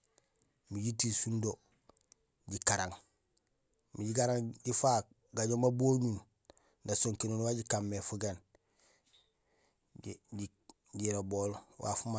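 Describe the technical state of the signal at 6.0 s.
The speech signal at 6.0 s is intact, with no fault present at that point.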